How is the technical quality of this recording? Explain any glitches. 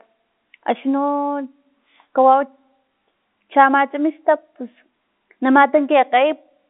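No audible glitches or faults.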